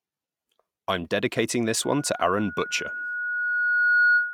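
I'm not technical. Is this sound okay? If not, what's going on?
No. A microphone is picking up the loudspeaker it feeds, so the sound keeps looping back and getting louder, which is loudspeaker feedback squeal. Right after "I'm dedicating this", at about 1.83 s, a single high tone near 1.4 kHz starts to rise. Over roughly two seconds it swells into a squeal that ends up louder than the speech, and it keeps going until the clip ends.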